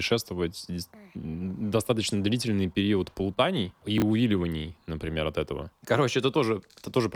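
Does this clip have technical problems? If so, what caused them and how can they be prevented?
Yes. Chunks out of order: from 3.98 to 4.02 s, a 20 ms chunk was delivered one slot late and played after the chunk that should follow it, causing a brief jumbled moment. Reordering chunks by sequence number before playback prevents this.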